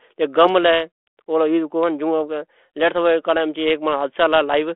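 Nothing goes wrong anywhere in this bit of speech; it just sounds like an ordinary call over a 32 kbit/s G.726 ADPCM link, with the usual narrow telephone band of roughly 250 Hz to 3.4 kHz.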